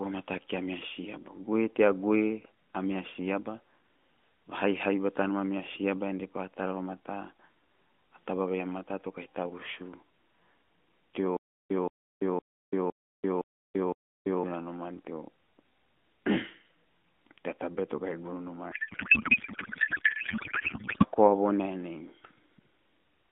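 Speech carried over narrowband AMR, with nothing above about 3.5 kHz, has two faults. From 11.37 to 14.43 s a stutter with silent gaps repeats one 174 ms burst six times every 511 ms, separated by 338 ms of digital silence. On the waveform this shows as identical blocks between flat silent stretches, likely from a stalled stream replaying its last fragment. From 18.72 to 21.06 s a codec payload misread turns the speech into garbled warbling noise. The spectrogram shows smeared energy unrelated to the speech's harmonics, which points to octet-aligned AMR frames being unpacked as bandwidth-efficient.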